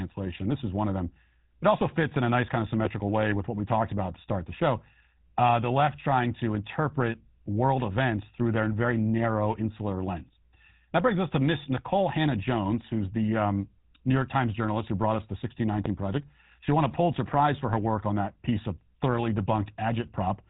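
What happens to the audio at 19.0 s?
At 19.0 s the speech carries GSM full-rate codec damage, which runs through the entire clip rather than starting there. The coder models the vocal tract as a filter and excites it with a sparse, regularly spaced pulse train, keeping only a fraction of the excitation detail, which fits the 13 kbps full-rate scheme. The result is a plainly audible buzzy, gravelly roughness on the voice, and nothing above about 3.9 kHz survives, so the sound is dull and band-limited.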